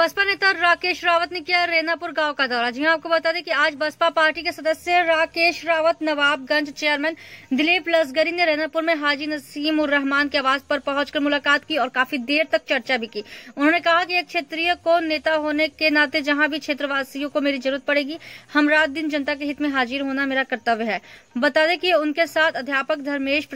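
No technical faults can be heard anywhere in the audio. There is nothing here that calls for a time or a cause.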